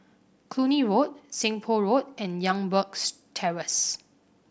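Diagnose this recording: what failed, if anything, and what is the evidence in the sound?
Nothing failed: no stage in the chain leaves a fault that can be heard in this speech.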